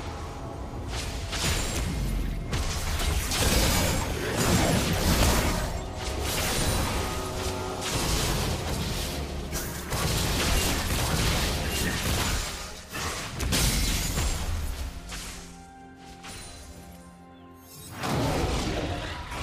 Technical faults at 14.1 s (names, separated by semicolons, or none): none